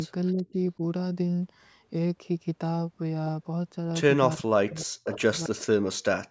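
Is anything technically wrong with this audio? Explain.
Yes. Three faults are present in this speech.

A DC offset runs through the whole clip. The waveform sits shifted away from zero by a constant amount. You cannot hear it directly. It eats headroom and leaves steady energy at the very bottom of the spectrum.

Echo leak appears at 0.27 to 0.32 s, 4.69 to 4.86 s, 5.04 to 5.09 s and 5.44 to 5.48 s. Brief scraps of a delayed copy arrive 382 ms late. They range from about 35 dB to about 15 dB below the speech. The likely cause is a far-end echo canceller failing to remove loudspeaker sound from its microphone.

Speech suppressed in double talk occurs at 0.33 to 0.55 s, 4.36 to 5.74 s and 6.17 to 6.3 s. The speech dips or drops out in pieces. The first dip is mild, roughly 15 dB. The later two fall roughly 40 dB, and the middle one affects about a second. This is likely an echo canceller turning everything down while both sides talked at once. 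The lack of content above 8 kHz is normal call processing, not a fault.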